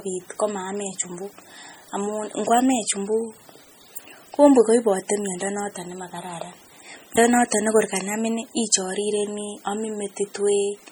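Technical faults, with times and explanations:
Throughout, MP3 compression: heavy codec damage gives the sound a watery, swirling quality, with smeared attacks and metallic chirps on sibilants. The likely cause is an MP3 encode at a low bitrate, which fits roughly 32 kbps. Short of bits, the encoder zeroes weak frequency lines, and these flicker on and off from frame to frame to produce the swirl. Content extends only up to about 20.3 kHz, with nothing above that.
7.16 s, CD skip: a very brief mute, well under 20 ms, interrupts the sound, and playback resumes from a different point. A knock or disc flaw made the laser jump to another turn of the spiral, so the player silenced its output for an instant and carried on from the new track position. The result is a tick or tiny gap followed by a sudden discontinuity.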